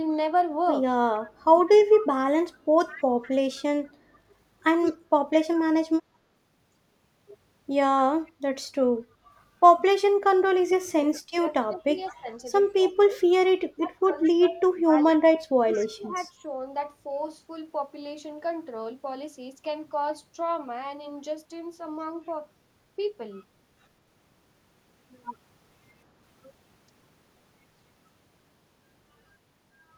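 From 1.3 to 3.29 s, a faint copy of the speech trails it by 199 ms, about 20 dB down. This echo leak is likely a far-end speakerphone whose echo canceller let its microphone pickup through. It returns at 4.85–5.36 s (about 20 dB down), 8.26–8.31 s (about 40 dB), 12.06–12.15 s (about 30 dB), 14.23–14.30 s and 15.75–15.86 s (both about 25 dB). The fixed delay marks it as a discrete repeat rather than room reverberation.

Between 10.83 and 13.17 s, and again from 13.76 to 16.48 s, the speech dips by up to about 25 dB for roughly a second and a half in each span. This is speech suppressed in double talk, likely the canceller ducking its own talker along with the echo while both sides spoke. It differs from packet-loss dropouts because the level is turned down while both sides talk, not lost in transit.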